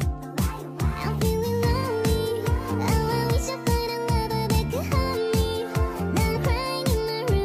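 The audio has damaged data in a compressed stream, heard three times as brief glitches of about 50 ms each: 0.28 to 0.33 s, 3.44 to 3.49 s, and 6.32 to 6.37 s. Corrupted bytes confuse the decoder. It loses frame sync until the next header.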